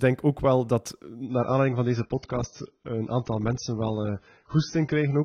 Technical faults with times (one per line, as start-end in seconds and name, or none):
1.25-5.25 adaptive stream at a lower bitrate